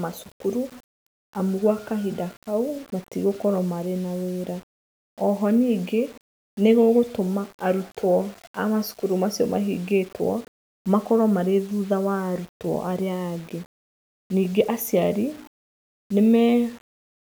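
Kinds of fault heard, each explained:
Low bit depth without dither: Grainy distortion runs through the whole speech clip and tracks the signal, roughening quiet stretches and making the softest moments sputter or drop out. The error sits around 30 dB below the signal, consistent with likely rounding to about 7 bits without dither.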